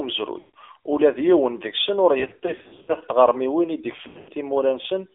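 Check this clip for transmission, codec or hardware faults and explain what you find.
Two problems show up, one that runs the whole way through and one that hits in three spots.

The whole clip has been through the AMR narrowband mobile codec. The line is squeezed to roughly 300 Hz to 3.5 kHz, and the speech has that buzzy, synthetic edge of a low-rate vocal-tract model rebuilding each frame from a few pulses, which fits the 7.4 kbps mode. The damage is plainly audible.

Then there are lost AMR speech frames. From 0.40 to 0.50 s, right before "ula d yiwen", the decoder fills about 140 ms by repeating its last good pitch and filter settings at falling gain, so the sound smears and sags. From 2.20 to 2.96 s, leading into "tɣermiwin i", the losses are scattered across about 680 ms, with runs no longer than 60 ms, giving a stuttering warble. From 3.92 to 4.31 s, just after "tɣermiwin i", about 260 ms goes missing over a 360 ms stretch. 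The longest run is 100 ms, enough to fade toward silence before the speech returns rough.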